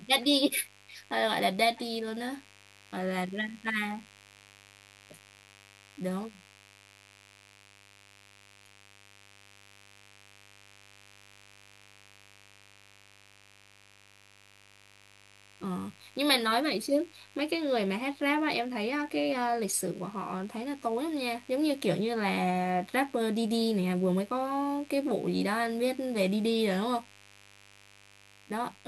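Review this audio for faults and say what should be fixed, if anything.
A steady, raspy mains buzz runs through the whole clip, roughly 30 dB below the speech. Sharp switching spikes, twice per 50 Hz cycle, spread harmonics into the kHz range. A spectrogram shows horizontal lines every 50 Hz, and pauses show spikes repeating every 10 ms.

Keeping dimmers and rectified supplies off the recording circuit and using shielded, balanced cabling grounded at a single point would prevent it.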